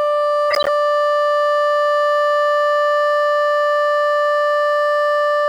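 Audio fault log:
0.51–0.68 s corrupt frame decoded: the decoder played several damaged compressed frames despite flipped bits, scattering energy to wrong frequencies, heard as a loud chirp, squeak, blip or burst of noise over the music, peaking around -5 dBFS.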